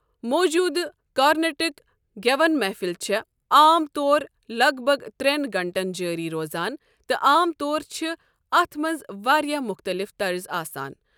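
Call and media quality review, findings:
No audible faults found.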